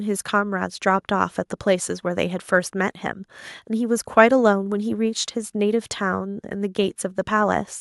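No technical faults are audible anywhere in this speech recording.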